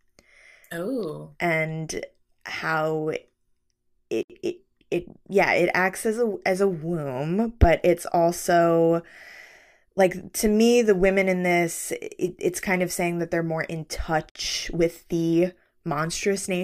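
At 4.23 s the speech drops into silence for about 68 ms, until 4.30 s. At 14.30 s it happens again, for about 54 ms, ending at 14.35 s. The two gaps sit 10 s apart. Each is a gap at a join of encoded pieces. The audio was encoded in separate runs and spliced without trimming the encoder's start delay and end padding. The edges are smeared, and the speech resumes where it left off.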